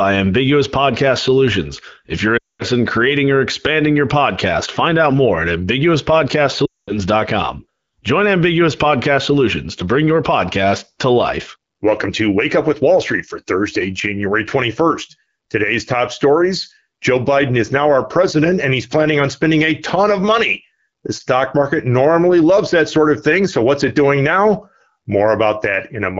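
At 2.37 to 2.63 s and again at 6.65 to 6.98 s, the speech suffers lost AMR speech frames. Each run of about 220 ms, which fits eleven consecutive 20 ms frames failing their checksum, makes the decoder repeat the last good pitch and vocal tract settings at falling gain. The sound drops to near silence within two frames, then returns weak or rough. On a spectrogram, flat harmonic streaks dim into a gap. The waveform shows a decaying envelope.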